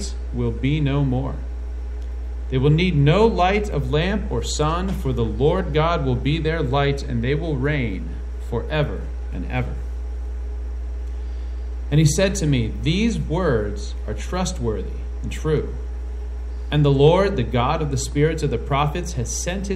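Mains hum runs from start to finish: a steady 60 Hz tone with low harmonics, sitting only a few decibels below the sound itself. A ground loop or nearby transformer has let the power line leak into the signal path, leaving a constant low drone under everything.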